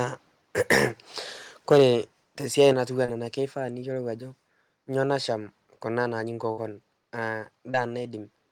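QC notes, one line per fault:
1.71–1.83 s and 2.60–2.69 s, microphone overload: the loudest syllables turn harsh and crackly, about 5 dB over full scale in the first and about 2 dB in the second. The likely cause is input gain set too high. The waveform shows flat-topped peaks, and the spectrogram shows broadband smearing above the voice.
1.74 s and 2.73 s, microphone volume stepped down: speech and background both fall abruptly, by about 2 dB and then about 5 dB, the first during a distorted peak and the second just after one. This is likely call software trimming a mic it judged too hot. The waveform envelope steps down and stays lower.
3.05–3.10 s and 7.71–7.76 s, short concealed packet loss: a brief smear or wobble where about 20 ms of speech failed to arrive. The decoder stretched the preceding sound for roughly 24 ms, then blended back. The spectrogram shows a few repeated, slightly blurred frames.
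6.52–6.59 s, burst of packet loss: about 60 ms of speech is missing. The receiver held the last sound for about 54 ms while fading it into a buzz or hiss, so playback skips ahead. The spectrogram shows a frozen, decaying band, then an abrupt resumption.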